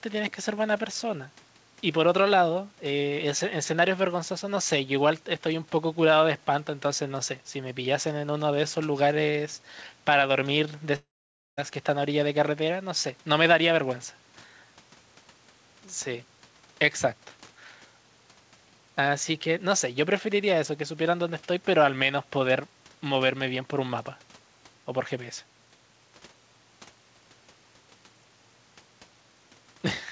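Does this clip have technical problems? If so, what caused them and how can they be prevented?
Yes. A long network dropout runs from 10.96 to 11.59 s: about 0.62 s of audio never arrived, so the receiver stretched the last sound into a brief fading buzz or hiss, then left roughly half a second of silence before the sound resumed with that stretch missing, likely caused by packet loss on the network. Preventing it means a more stable connection, such as wired rather than Wi-Fi, along with forward error correction or redundancy in the call settings.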